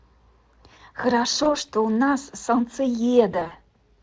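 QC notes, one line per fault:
1.43–1.57 s and 3.31–3.53 s, VoIP packet loss concealed by the speech codec: a single 20 ms gap, then about 100 ms lost in bursts scattered over 200 ms, longest 40 ms. The decoder repeats its last pitch and filter at falling gain, so the speech is stretched into a buzzy tone or coloured noise that fades, recovering slowly. On a spectrogram, harmonics stretch into flat, dimming stripes; the waveform shows a periodic, decaying envelope.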